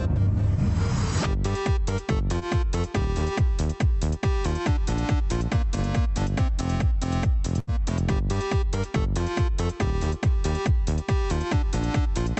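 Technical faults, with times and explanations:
2.39–2.43 s, short concealed packet loss: about 20 ms of audio never reached the decoder in time, and the receiver bridged the hole with roughly 20 ms of synthesised sound. It extended what came just before, following its pitch or imitating it as shaped noise, then crossfaded back into the real signal. The result is a brief smear or wobble, and whatever sound fell in that slot is lost.
7.59–7.69 s, burst of packet loss: about 80 ms went missing in one run, too long to patch invisibly. The receiver filled some 78 ms by carrying the last sound forward and fading it down as the gap went on. It comes across as a held buzz or dying hiss before the audio resumes further along, with the stretch in between gone. The call codec's band stops at 8 kHz here.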